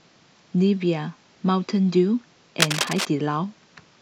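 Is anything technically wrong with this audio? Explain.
Yes. From 2.60 to 3.05 s there is cable scratch noise. The likely cause is a worn cable, connector or control being moved, so that its contact resistance jumps about rapidly and modulates the signal path. For that half second, dense, irregular bursts of crackling noise ride over the speech at roughly the same loudness as the speech itself, heard as a brief scratching, rustling layer before the sound clears again.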